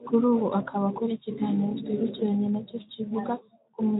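No technical faults occur anywhere in the speech. It has passed through a Speex codec at a light setting, which leaves only mild coding texture and a band limit around 3.8 kHz, with nothing audible above that.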